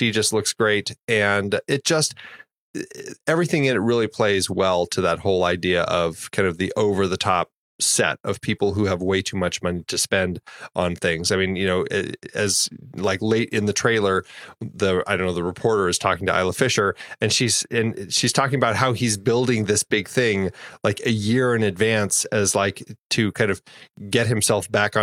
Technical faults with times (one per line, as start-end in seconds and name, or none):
none